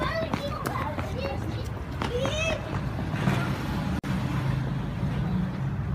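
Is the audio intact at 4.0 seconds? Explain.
No. A gap at a join of encoded pieces drops the sound for 46 ms, from 3.99 to 4.04 s: untrimmed encoder delay and padding leave an abrupt silence with smeared edges before it resumes.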